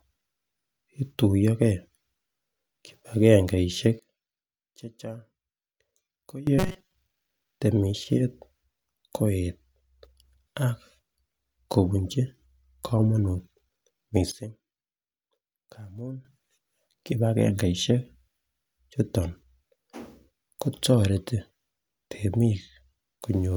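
Speech that twice drops abruptly in level. From 3.99 to 6.47 s, everything, background noise included, falls by about 16 dB in a single step and returns just as abruptly. The same thing happens from 14.32 to 16.25 s, with a drop of about 15 dB. In both cases this is a sudden gain jump, likely a digital gain change applied instantly rather than ramped. That is why the voice and the noise floor step down and back up together. Right after the first dip, from 6.58 to 6.95 s, the voice turns into a rigid, metallic buzz pitched at 188 Hz that only loosely tracks the speech. This is robotic sound from repeated short buffers, likely caused by audio arriving too late while the playback side keeps looping its last fragment, which fits a buffer of about 5.3 ms. Most of that stretch is repeated material rather than real audio.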